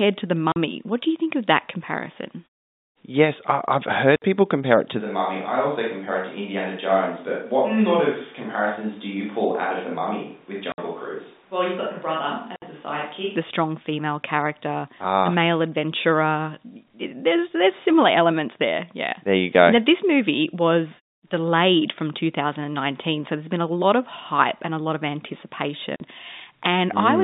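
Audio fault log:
0.52–0.56, 4.16–4.22, 10.72–10.78, 12.56–12.62 and 25.96–26.00 s: packet loss filled with silence. Holes of 40 and 60 ms with hard edges, which fits lost 20 ms packets replaced by silence.
5.00–13.35 s: switch to a distant microphone. The sound abruptly turns roomy and hollow, about 10 dB quieter, with room noise about 35 dB below speech. A farther microphone is the likely cause.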